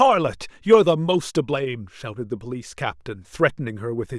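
Speech with a brief burst of hard clipping from 0.73 to 0.75 s, where the peaks overran the stage by about 2 dB and were cut flat. It is heard as a short crackle on that peak alone, not a lasting fuzz, and its flat-topped waveform tells it apart from gentler soft saturation.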